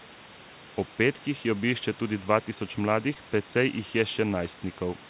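A short concealed packet loss hits this speech clip at 3.14 to 3.17 s, right after "obišče tudi dva tisoč": about 20 ms of audio arrived too late, and the receiver continued the preceding sound to bridge the gap before blending back, leaving a brief smear within the telephone-band G.711 audio.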